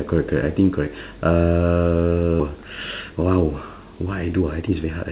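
Speech over what sounds like a narrowband call line, with nothing above 4 kHz, consistent with the 64 kbps G.711 A-law codec. At 2.40 to 2.42 s the talk lurches forward with no gap at all. About a second of speech is simply absent, and the two sides are butted almost directly together. This is a skip ahead: a block of audio was lost in transit or discarded by an overflowing jitter buffer while later audio was already queued, so playback resumed from the newer material. Straight after that, from 2.49 to 5.06 s, the speech runs noticeably quick and slightly rushed, at about 113 percent of normal speed, yet the pitch stays where it was. That is jitter buffer speed-up. The buffer was holding more audio than its target, likely after delayed packets arrived in a bunch, and the receiver trimmed out tiny slices of one or a few pitch periods again and again, removing roughly a third of a second in total to bring the delay back down.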